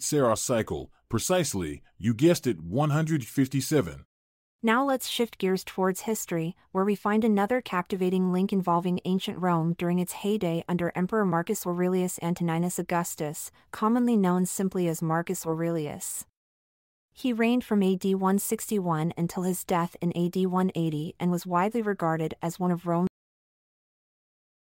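At 23.07 s, right after "regarded as one of", you get a cut-off end: the final buffers never got written, so the speech stops mid-sound and drops straight to dead digital silence.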